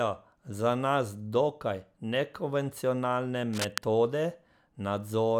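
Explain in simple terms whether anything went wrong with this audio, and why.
Something did go wrong, briefly. Right after "dokaj nekonvencionalne", from about 3.53 to 3.78 s, a quarter-second burst of scratchy, rustling noise sits on top of the speech, and it's fairly loud, not far below the voice itself. That's cable scratch noise. The likely cause is a worn cable, plug or knob being jiggled, so the electrical contact flickers rapidly and sprays uneven crackle into the signal for that moment.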